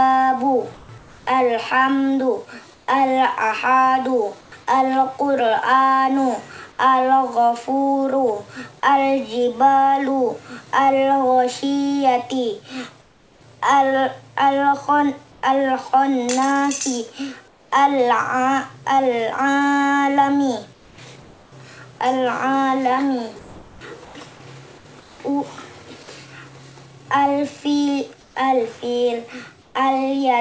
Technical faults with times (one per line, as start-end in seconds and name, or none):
0.74-4.52 comfort noise in place of the background
13.02-15.43 comfort noise in place of the background
17.48-17.72 comfort noise in place of the background
20.73-25.20 comfort noise in place of the background
28.21-29.75 comfort noise in place of the background